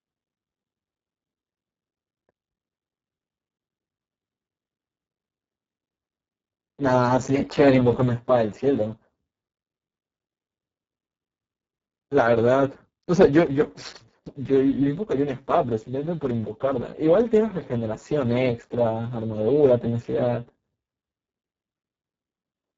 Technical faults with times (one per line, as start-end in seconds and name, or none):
0.00-22.78 Speex codec